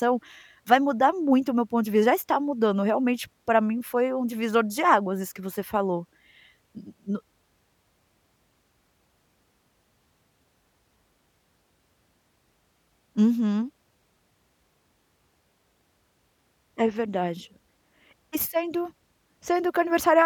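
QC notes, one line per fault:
No technical faults detected.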